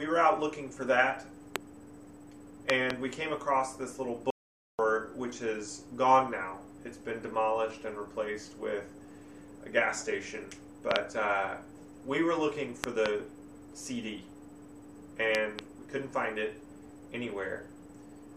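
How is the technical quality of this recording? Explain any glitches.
The recording has two kinds of fault: repeated loud pops and one playback stall.

Loud pops occur at 1.56 s (single), and as close pairs at 2.70–2.92 s, 10.91–10.98 s, 12.84–13.08 s and 15.35–15.61 s. Each peaks roughly 20 to 25 dB above the signal. These are likely voltage spikes from switching, static or a driver glitch, heard as sharp thumps over continuing sound.

A playback stall runs from 4.30 to 4.79 s, about 485 ms of silence in mid-flow. The likely cause is the player running out of buffered data or its thread being blocked. Output drops out abruptly until the player recovers, and then the sound resumes.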